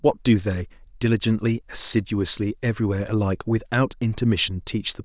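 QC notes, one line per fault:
No faults heard; nothing to log.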